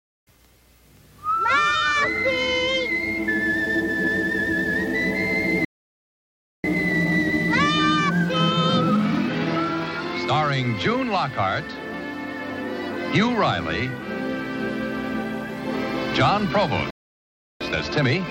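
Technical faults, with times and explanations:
5.65 to 6.64 s, playback stall. The audio cuts to silence in mid-flow for about 0.99 s, then resumes. The output simply stopped delivering sound. The likely cause is the player running out of buffered data or its playback thread being blocked for that second.
6.64 to 9.64 s, time-compressed catch-up. For 3 s after the stall the audio runs hurried, at 1.1 times normal speed. The pitch stays put because the player removes short slices and cross-fades the joins rather than resampling.
16.90 to 17.61 s, playback stall. A second dropout brings about 0.7 s of silence before the sound returns. It is shorter than the first gap but just as abrupt. Again the output stopped delivering sound, likely from another buffer underrun or a blocked thread.
17.61 s to the end, time-compressed catch-up. The audio runs at 1.25 times normal speed, at unchanged pitch. 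The rush is stronger than after the first stall, so slices are cut out more often.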